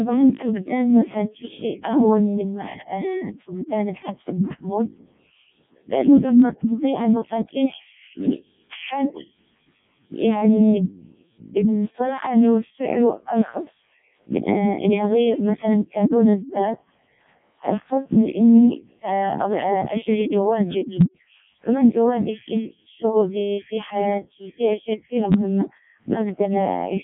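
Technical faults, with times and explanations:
Throughout: Codec 2 vocoder. The speech is rebuilt from sine waves, not the original waveform, so it sounds robotic and buzzy. The damage is heavy, which fits the lowest 0.7 kbit/s mode. Nothing is heard above 3.8 kHz.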